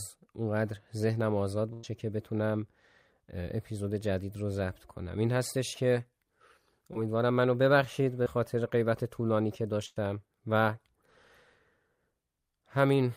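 Speech with two bursts of packet loss, at 1.73 to 1.85 s and 9.86 to 9.98 s: about 100 ms of audio never arrived, and a fading continuation of the last sound fills the hole, seen as smeared, decaying spectral bands before the waveform jumps ahead. Two brief episodes of short concealed packet loss, at 6.93 to 6.97 s and 8.23 to 8.28 s, cause a quick smear or wobble where 20 and 40 ms went missing, showing as a short blurred patch in the spectrogram.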